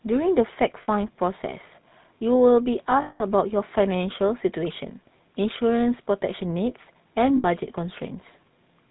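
Throughout the speech, the GSM full-rate codec leaves a buzzy, gravelly roughness. It rebuilds the voice from a vocal tract model driven by spaced pulses. Nothing above 4 kHz survives. The damage is plainly audible, and the sound fits the 13 kbps full-rate coder.

Lost GSM frames interrupt the speech from 0.82 to 0.89 s, 3.02 to 3.21 s, and 7.36 to 7.45 s. Each gap is filled by repeating the last good frame. That gives a brief rough, metallic ring. The longest ring, at 3.02 s, lasts about 180 ms.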